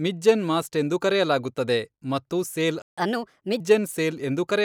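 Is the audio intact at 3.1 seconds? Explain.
No. At 3.1 seconds the clip is inside a catch-up at higher speed, running from 2.98 to 3.60 s, just after "ಎಂದು ಕರೆಯಲಾಗುತ್ತದೆ ಮತ್ತು ಸೇಲ್". After a stall, the player drains its built-up backlog by resampling it 1.25 times faster to regain lost time. Because resampling shifts pitch along with tempo, the speech rushes forward and rises by roughly four semitones, a chipmunk-like lift, before snapping back to normal rate and pitch.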